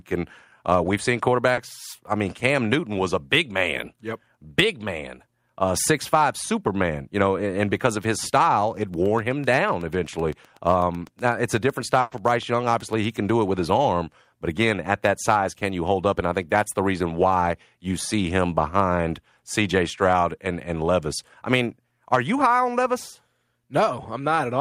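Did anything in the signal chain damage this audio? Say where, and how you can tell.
Yes, three separate problems, two on the network side and one upstream of it.

At 1.53 to 1.59 s there is short concealed packet loss: roughly 40 ms of the stream arrived too late, and the decoder papered over it by extending the preceding sound, giving a brief smear rather than a hard gap. It is network loss, not a click, because the blip has the texture of the surrounding sound instead of a sharp transient, then blends straight back.

From 8.82 to 13.30 s a train of clicks rides over the audio: around forty near-identical ticks at a steady 8 per second, peaking about level with the program and audible in pauses too. That persistence through silence and the uniform shape separate it from codec or loss artefacts, which follow the signal. The likely cause is interference from nearby equipment or a faulty connection or power supply in the analogue wiring.

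Inside that stretch, at 12.01 to 12.13 s, sits a burst of packet loss: about 100 ms went missing. The receiver continued the last sound and turned it down as the gap went on, then resumed further on without any silence, so a chunk of the sound is simply gone. Its length and fading hold distinguish it from the brief 40 ms concealment earlier, and it is unrelated to the regular clicks around it.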